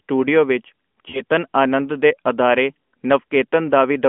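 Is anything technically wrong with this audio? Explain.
Yes. From 1.10 to 1.21 s there are lost AMR speech frames: the decoder repeats its last good pitch and vocal tract settings at falling gain, so the speech smears and fades rather than cutting to silence, then returns weak. The gap fits two 20 ms frames.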